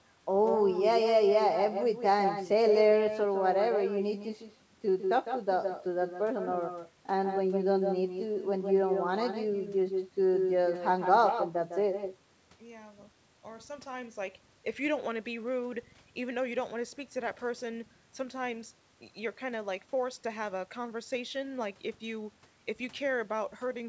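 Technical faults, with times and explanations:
Throughout, echo with no canceller. Every phrase is shadowed by a second copy about 7 dB quieter, roughly 150 ms later. The far end plays the call on a loudspeaker. Its microphone picks it up and sends it back unremoved. The copy sounds thin.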